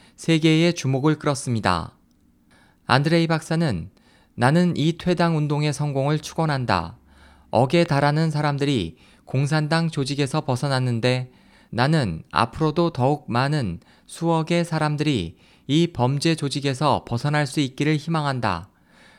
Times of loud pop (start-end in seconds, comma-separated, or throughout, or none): 7.86-7.88